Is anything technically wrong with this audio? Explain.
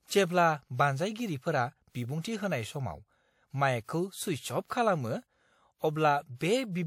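Yes. Pre-echo appears at 1.90 to 1.95 s, 2.22 to 2.24 s and 4.67 to 4.70 s. The codec spreads quantisation noise across each block, so noise meant for a sharp speech onset leaks 29 to 53 ms ahead of it as a short hiss, blurring the attack.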